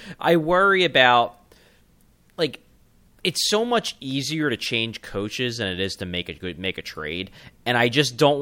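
No technical faults occur at any point in the recording, so there is nothing to describe in time order.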